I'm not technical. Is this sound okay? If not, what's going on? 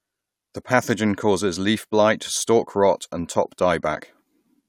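Yes, it sounds fine to me, with nothing wrong I can hear anywhere in the recording.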